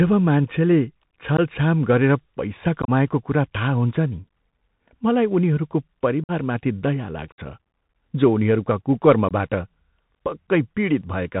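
Throughout, the speech carries a Bluetooth CVSD headset codec. Its 64 kbps one-bit up-or-down stream keeps everything below 4 kHz. A granular hiss sits underneath, and s sounds turn scratchy where loud high content outruns the adaptive step size. That hiss and scratch set it apart from the smeared, watery sound of other low-bitrate codecs.

Unconcealed Bluetooth headset packet loss then cuts holes with abrupt edges. They fall at 1.37–1.40 s just before "गरेर पैसा", and at 2.82–2.90 s between "गरेर पैसा" and "कुरा थाहा हुन्छ नि", where about 45 ms goes missing in scattered pieces. Further holes follow at 6.24–6.31 s, 7.32–7.40 s and 9.29–9.32 s. Nothing fills these gaps with the smoothed or repeated sound that concealment would leave.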